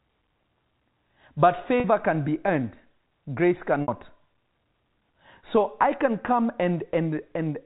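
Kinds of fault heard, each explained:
Packet loss with pitch repetition at 1.80 s and 3.82 s: gaps of 40 ms and 60 ms were bridged by repeating the last pitch period, giving a brief held, buzzy tone just before "can be earned grace" and again right after it.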